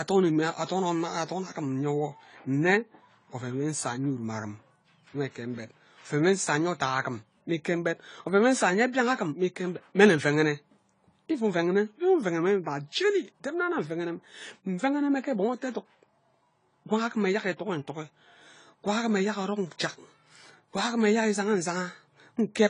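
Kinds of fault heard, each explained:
AAC compression: the speech sounds dull and smeared, with a warbling, fizzy edge on sibilants, likely from AAC-LC coding at a low bitrate consistent with 24 kbps. A spectrogram shows a flat ceiling with nothing above 10 kHz.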